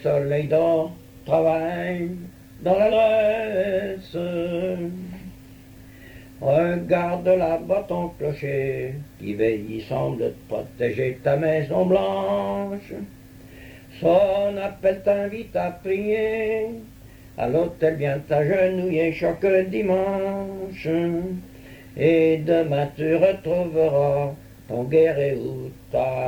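There's a short burst of damaged data in the compressed stream at 2.88 to 2.92 s, a 40 ms glitch where the decoder misreads the corrupted frames and loses sync before picking up again.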